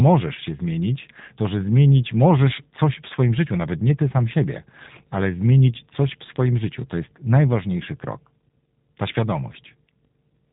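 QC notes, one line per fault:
throughout, G.729 codec: the speech is band-limited with nothing above 4 kHz and has a plainly audible buzzy, synthetic roughness, consistent with an 8 kbit/s codec that rebuilds each 10 ms frame from a vocal tract model, a pitch predictor and sparse pulses.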